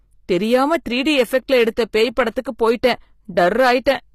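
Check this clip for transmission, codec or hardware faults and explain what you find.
Two faults run through the whole speech clip: hard clipping and damage that points to HE-AAC compression.

Hard clipping lasts from start to end. The signal is driven about 6 dB past what a stage in the chain can pass, so the loudest peaks are sliced flat, roughly one sample in a hundred. Those squared-off tops create high harmonics that are heard as brief crackle riding on the strongest syllables. Soft saturation or a limiter would round or duck the peaks and sound warmer. Here the distortion is sharp and appears only at the peaks.

The second fault is also present throughout and is plainly audible. Its likely cause is HE-AAC compression at a low rate, in the range of HE-AAC v2 near 24 kbps. The codec kept only the lower spectrum and rebuilt the treble by copying lower bands upward under a coarse envelope. 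As a result, s sounds come out gritty and metallic. There is also no content above 15.5 kHz. A plain low-pass codec would leave the top dull, but here the treble is present and sounds synthetic.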